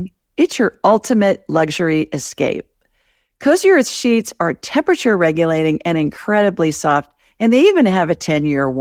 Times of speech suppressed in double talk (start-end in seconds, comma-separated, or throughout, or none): none